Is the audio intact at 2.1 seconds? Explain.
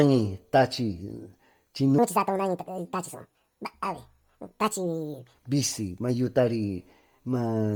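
No. From 1.98 to 5.35 s there is a section at the wrong speed, likely a clock mismatch, running 1.64 times fast. Pitch rises about ten semitones and timing hurries together, unlike a pitch shift that keeps the pace.

Heavy Bluetooth LC3 compression with 10 ms frames, consistent with about 32 kbps, also colours 2.1 s. Noise filling in the zeroed upper band gives a breathy, grainy edge rather than a dull, cleanly cut top.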